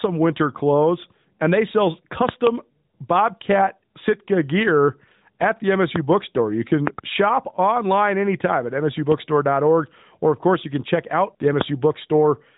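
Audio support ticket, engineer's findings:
Loud pops at 5.96–5.98 s, 6.87–7.01 s (double pop, just before "shop online anytime at"), 9.12–9.14 s (just after "shop online anytime at") and 11.61–11.63 s (just after "can check out the"). Sharp thumps about 20 dB above the signal, about 15 dB at 9.12 s, with the sound continuing underneath. Likely a connector, switch or static discharge injecting a voltage step that the following stages shape into a brief pulse. On the waveform they appear as narrow spikes standing well clear of the speech envelope. On the spectrogram they are thin vertical full-height stripes.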